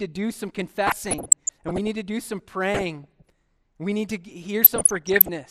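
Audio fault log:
throughout: MP2 compression. The speech has likely passed through an MPEG Layer II encoder at a low bitrate, around 80 kbps, starving upper sub-bands of bits so they drop out or quantise coarsely. The result is a dull, plainly audible gurgling, granular texture.
0.87–1.88 s, 2.74–3.30 s, 4.64–5.29 s: DAB burbling. Bit errors, roughly 0.4 percent rising towards 0.7 percent in the last burst, slipped past error correction into the MP2 data, corrupting samples so short blips of noise appear in single sub-bands, giving a burbling texture.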